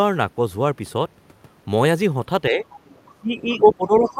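Speech clip with speech suppressed in double talk and the other side's voice leaking through, both likely from an echo canceller struggling while both parties talk. The talker's level sags slightly at 2.49–2.66 s, then drops much harder from 3.09 s to the end, at worst by about 15 dB. This is a dip imposed from outside, not a natural drop in the talker's delivery. A second, faint voice intrudes at 2.75–3.02 s, 3.48–3.57 s and 4.03–4.13 s, roughly 20 to 25 dB below the speech. It is a separate talker rather than a reverberant tail of the main voice.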